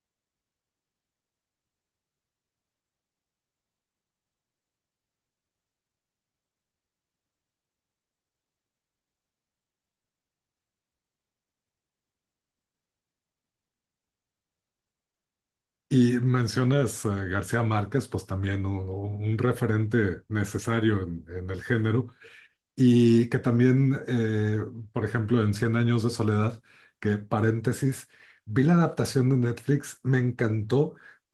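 The clip is speech, and nothing is technically wrong with it.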